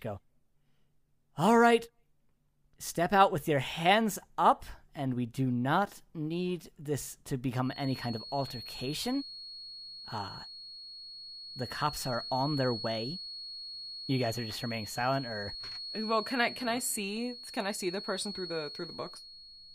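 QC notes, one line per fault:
7.6 s to end, feedback whistle: thin, steady 4.3 kHz tone roughly 15 dB under the speech, swelling and fading slowly in level; likely a speaker-to-microphone loop sitting just at the feedback point.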